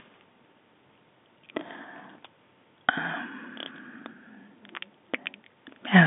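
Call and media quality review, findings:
No faults found; telephone-band speech, nothing above 3.6 kHz.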